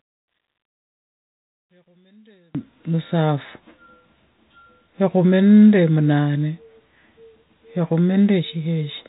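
From 0 to 2.55 s the speech nearly vanishes, sinking about 34 dB, likely from one channel inverted, so the shared centre cancels in mono.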